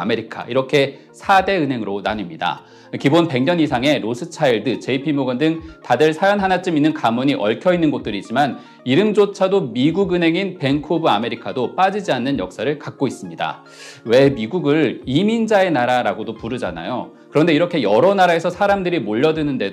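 At 4.50 s the stream most likely lost a tiny run of samples, well under a millisecond's worth, so the waveform skips straight from one value to a later one with nothing in between. That abrupt step is a case of dropped samples: far too brief to take any sound away, it is heard only as a single sharp click, and it would show as a thin vertical line running across the whole spectrum at that instant.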